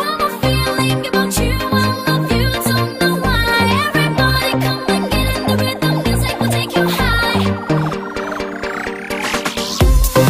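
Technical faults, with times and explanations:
No technical faults detected.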